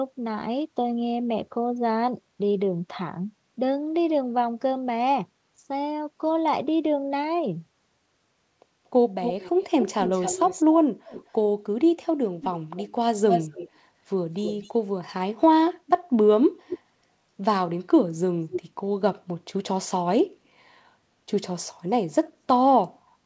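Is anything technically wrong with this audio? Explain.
Yes. An echo leak appears at 9.23–10.64, 11.08–11.31, 12.41–12.48, 12.76–12.89, 13.29–13.69, 14.43–14.71, 16.68–16.79 and 18.51–18.61 s. A fainter copy of the speech trails it, the delay creeping from 233 to 258 ms. This is likely leftover loudspeaker pickup that an echo canceller failed to remove. The copy sits 5 to 20 dB below the speech and is loudest around 13.3 s. On a spectrogram it appears as a ghost of the harmonic bands shifted right, all under the call path's 8 kHz ceiling.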